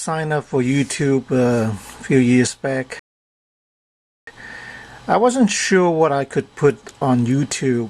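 At 2.99 s the sound cuts abruptly to silence, holds for about 1.28 s, then picks up at 4.27 s exactly where it broke off. This is a rebuffering stall: playback exhausted its downloaded audio and paused until more data arrived, inserting dead time without dropping any material.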